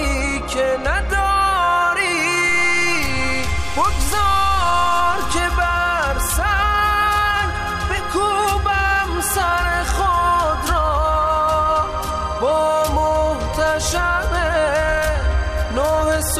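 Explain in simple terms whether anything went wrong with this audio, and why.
Something did go wrong: a DC step. At 2.49 s the waveform's zero line jumps, making a low thump, and the offset is gone by 5.39 s.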